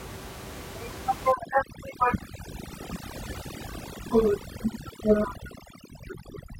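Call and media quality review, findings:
Overdone noise removal, 1.32 s to end of clip. Background room noise, about 11 dB below speech, drops and breaks up into twinkling musical-noise specks. Probable component: noise suppressor set too aggressive, gating individual frequency bands near its noise estimate and taking low-level speech energy with them. Spectrogram: isolated bright dots scattered over dark background, ragged holes in speech harmonics. Waveform: quiet floor between phrases.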